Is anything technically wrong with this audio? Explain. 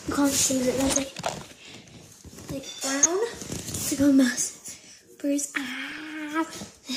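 Yes. DAB burbling appears at 0.93 to 0.97 s, 3.02 to 3.06 s and 5.92 to 6.05 s. Bit errors of around 0.1 to 0.15 percent corrupt samples in single sub-bands, and where scale factor errors get through, sub-bands jump in level for up to a frame. This produces short blips of noise that show on a spectrogram as brief, blocky, isolated band flashes.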